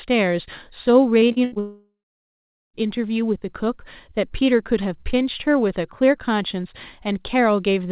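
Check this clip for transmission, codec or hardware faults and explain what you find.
Two transmission faults sit back to back early on, heard through a narrowband call path with nothing above 4 kHz, which fits G.711 mu-law at 64 kbps.

From 1.2 to 1.58 s there is repeated packet loss with a choppy, robotic sound. Five gaps, the longest 74 ms, were patched by stretching the previous audio, covering nearly half that span.

From 1.6 to 2.76 s a smeared buzz fades into about 0.8 s of silence before the sound resumes with a piece missing. The likely cause is a long network dropout, with the receiver padding the gap.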